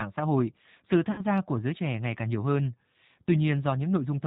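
Throughout, the speech carries G.729 codec damage: band-limited below 4 kHz and rough, synthetic-sounding, which fits 8 kbit/s model-based coding rather than plain low-pass filtering. From 1.12 to 1.21 s, between "xã hội sự" and "gia của giới trẻ", VoIP packet loss concealed by the speech codec stretches the last sound into a fading buzzy tone or coloured noise. It covers about 60 ms, which fits two lost packets, and stays weak or distorted just afterwards, unlike a silent dropout.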